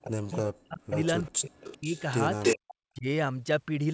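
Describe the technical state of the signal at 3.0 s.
At 3.0 s the speech drops away sharply, sinking by around 40 dB between 2.79 and 3.06 s. This is likely speech suppressed in double talk: with both sides talking, the echo canceller mistook the talker for loudspeaker echo and attenuated it.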